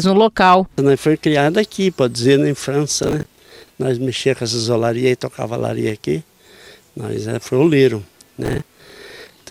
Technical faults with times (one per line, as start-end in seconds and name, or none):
3.03-3.73 processor overload crackle
8.43-9.38 processor overload crackle